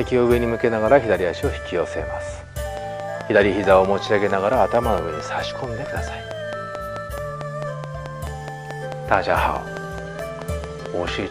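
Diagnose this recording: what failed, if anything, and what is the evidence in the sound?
A repeating pulse is entering the signal chain, likely interference coupling into the analogue wiring. The result is a train of clicks from 2.77 s to 11.09 s: about forty same-shaped ticks, evenly spaced at 4.57 per second, peaking about 10 dB above the sound.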